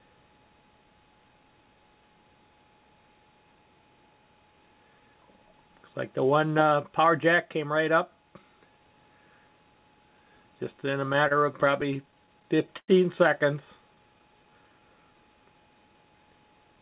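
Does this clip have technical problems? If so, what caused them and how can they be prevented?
Yes. Between 10.86 and 12.90 s the audio catches and drags in a rapid run of 17 small hitches. Each hitch holds the preceding sound for a moment, and the longest lasts about 103 ms. Together they add about 270 ms of held sound, roughly 13% of that stretch, without dropping anything. These are repeated stalls (stutter). Packets arrived late or too slowly, the jitter buffer kept running dry, and the receiver stretched the last sound to cover each wait. Giving the buffer more starting depth and keeping the network path free of congestion would prevent it.

From 13.89 to 14.87 s the sound slows to about 92% speed while keeping its pitch, with drawn-out sounds that add about 82 ms. This is a jitter buffer slow-down. The buffer was running low, so the receiver repeated single pitch periods to rebuild its reserve before continuing at normal pace. 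A steadier network, or a buffer whose target delay adapts earlier and more gently, would avoid this stretching.

Through the whole clip the call path's narrowband coding can be heard, with nothing above 4 kHz, which fits G.711 A-law at 64 kbps.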